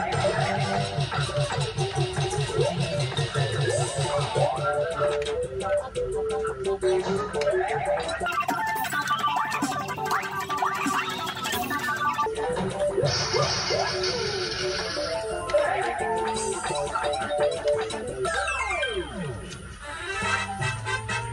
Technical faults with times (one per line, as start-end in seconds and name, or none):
8.26-12.26 wrong sample rate